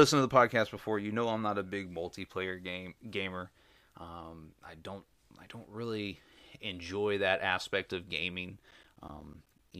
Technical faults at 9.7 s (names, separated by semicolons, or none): periodic USB or driver dropouts